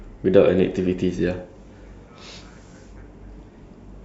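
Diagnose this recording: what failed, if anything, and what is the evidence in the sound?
Nothing failed here: listening across the speech, there's no break, glitch or distortion that would point to trouble at any stage of the chain.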